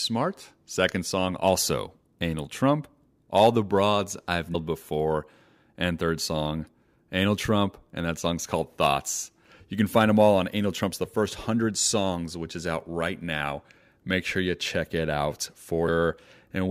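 Speech with compressed frames skipped twice: about 200 ms vanishes at 4.54 s, and about 300 ms at 15.87 s, after "you check it out". Whole 26.1 ms frames go missing, and the audio jumps ahead by the length of the frames left out at each join.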